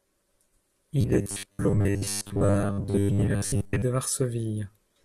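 Speech, with robotic sound from repeated short buffers running from about 1.01 to 3.82 s. The voice collapses into a rigid, metallic buzz at 100 Hz that still loosely tracks the words. That's likely audio arriving too seldom, with roughly 10 ms chunks replayed for most of that stretch while fresh audio gets skipped.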